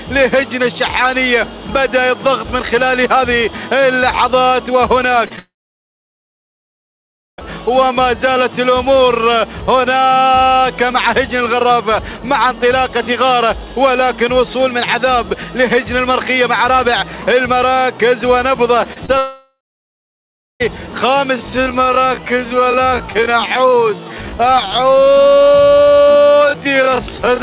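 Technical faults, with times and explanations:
5.26–5.32 s and 5.36–5.39 s, short concealed packet loss: about 40 ms then 20 ms are bridged by continuing the last sound, giving brief smears rather than silence.
5.39–7.44 s, long network dropout: about 2 s never arrives, likely from a network stall. The concealment buzz fades within a fraction of a second, then roughly 1.9 s of silence follows. The sound resumes further on, unlike a brief smear.
18.84–18.87 s, 18.93–18.98 s and 19.06–19.10 s, short concealed packet loss: three roughly 20 ms gaps in quick succession are patched with extended sound, heard as a rapid wobble.
19.18–20.62 s, long network dropout: about 1.4 s is lost, likely a second connection stall. After the fading fill there is about 1.1 s of silence before the audio picks up past the missing part.
21.28–27.42 s, time-stretched section: the pace abruptly drops to about 0.58 times normal speed while the pitch stays put. 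This is likely from software repeating short pieces. It is not a dropout, because nothing is missing. Throughout, the narrow band with nothing above 4 kHz comes from the G.711 call path.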